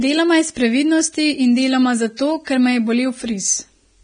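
Throughout the clip, heavy lossy coding, likely Vorbis compression at a rate near 22 kbps, discards everything above 9.7 kHz and quantises the remaining treble coarsely. The speech sounds dull yet hissy and grainy, with roughened tones and blurred consonant onsets.

From 2.17 to 2.19 s, between "iz previdnosti in deloma" and "ker me je", a pre-echo appears. The coding noise for a sharp attack spreads back through its block, so a short 23 ms hiss runs ahead of it and the onset sounds smeared.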